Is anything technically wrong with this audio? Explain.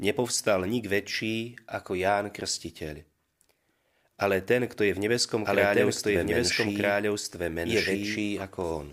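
Yes. A doubled audio track runs from 5.45 to 8.19 s, after "kto je v nebeskom". A slower second capture path likely adds a copy about 1.5 s late at similar loudness, so the speech overlaps itself and the copy starts and stops abruptly.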